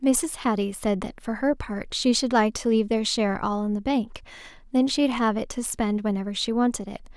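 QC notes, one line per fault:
No faults heard anywhere in this speech clip.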